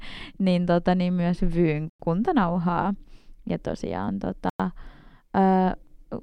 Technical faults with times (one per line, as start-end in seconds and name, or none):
1.90-2.00 gap between chunks
4.50-4.60 gap between chunks